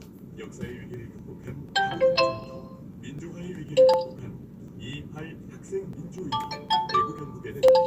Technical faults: periodic USB or driver dropouts

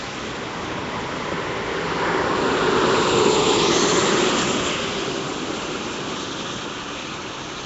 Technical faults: Nellymoser compression

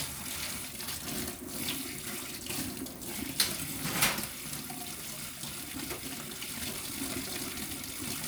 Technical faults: time-stretched section

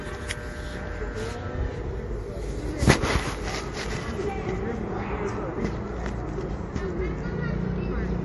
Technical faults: MP3 compression

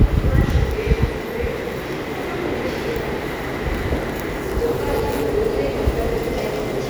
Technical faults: none

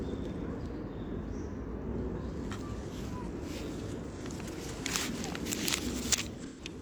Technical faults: AAC frame loss with concealment

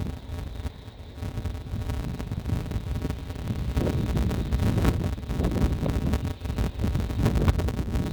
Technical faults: interleaved audio read as planar

